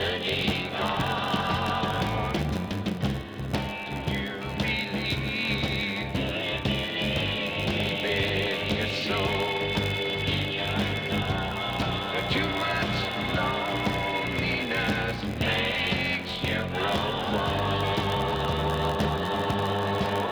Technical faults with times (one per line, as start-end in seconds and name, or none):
0.00-20.32 block size mismatch (padded)